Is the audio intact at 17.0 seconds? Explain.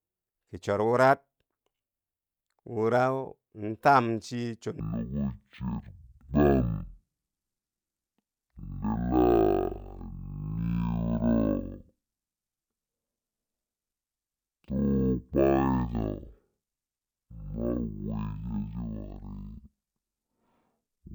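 No. At 17.0 seconds the speech falls inside a stereo-read-as-mono fault running from 4.80 s to the end of the clip. The left and right samples, which alternate in the stream, are being taken one after another as a single channel, so every moment of sound occupies twice as many samples. Playback runs at half speed and 12 semitones low, a full octave down, with a fainter mirrored copy of the sound in the upper half of the spectrum.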